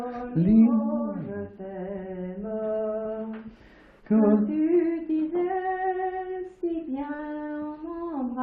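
At 3.03–3.07 s and again at 7.17–7.21 s, short concealed packet loss: about 20 ms of audio never arrived, and the decoder bridged each gap by extending the preceding sound before blending back. Unlike a hard dropout or click, it leaves a brief smear, not silence.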